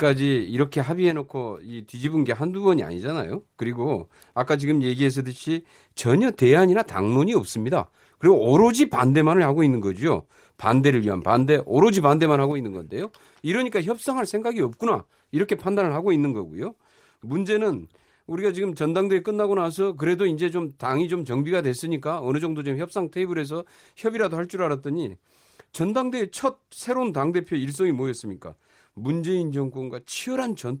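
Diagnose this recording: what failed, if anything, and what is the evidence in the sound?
One channel drops out twice: the speech steps down by about 6 dB at 1.11 s, recovers at 2.04 s, then falls again at 12.52 s and stays low to the end. The drop is an instant halving with no fade or ramp, and the speech never goes silent, which separates it from a gain-control swing or a full dropout. The likely cause is an intermittent connection in the analogue wiring feeding one side before the mono sum. The light Opus coding is unaffected.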